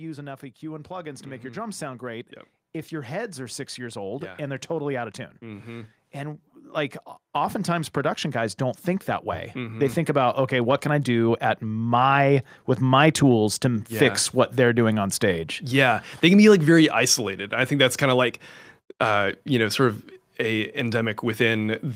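From 0.6 s to 12.41 s the automatic gain control judged the input too quiet and kept raising its gain, climbing by about 20 dB over those twelve seconds. Because the boost acts on everything at once, the speech and the background noise floor swell together, so the room grows steadily louder and closer along with the voice. The rise has levelled off by the time "with my tools to" is heard.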